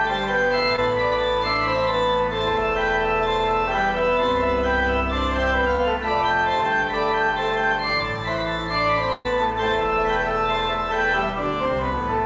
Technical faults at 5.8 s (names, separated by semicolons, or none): short concealed packet loss